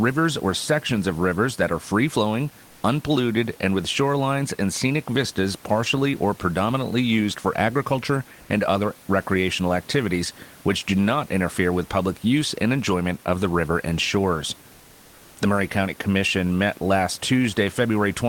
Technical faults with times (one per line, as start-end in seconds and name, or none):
8.41-8.49 comfort noise in place of the background